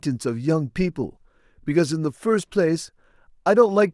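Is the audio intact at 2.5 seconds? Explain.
Yes, the audio is intact at 2.50 seconds, with the speech passing through that moment without any audible dropout, click or distortion.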